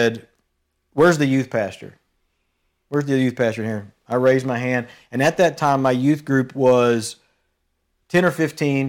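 Nothing stood out as a technical fault anywhere in the recording.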